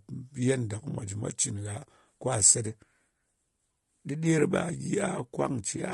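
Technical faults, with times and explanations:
Throughout, low-delay AAC compression: the speech sounds rough and grainy, with a hiss filling the gaps between the harmonics and a dulled, somewhat artificial top band. This is likely AAC-ELD, the low-delay codec used for video calls. It codes about 500 frequency lines a frame, and with too few bits to quantize them finely, coding noise spreads between the harmonics. The damage is plainly audible and fits a rate around 32 kbps, too few bits to keep voiced sound clean.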